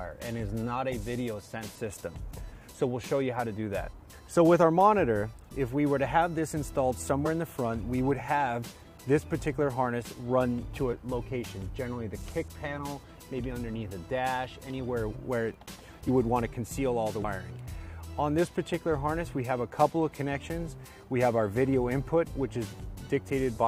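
At 7.25 to 7.28 s there's a case of compressed frames skipped. Whole frames never got decoded, so the audio jumps forward by roughly a twentieth of a second. It happens again at 17.21 to 17.24 s with a bigger jump, around a tenth of a second.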